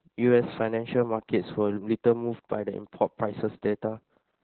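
Throughout, heavy Opus voice compression, fitting roughly 8 kbps narrowband SILK, removes everything above 4.3 kHz, leaving the speech muffled, hoarse and slightly robotic.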